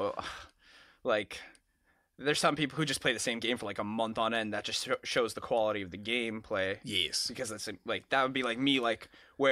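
No technical faults can be heard anywhere in the recording.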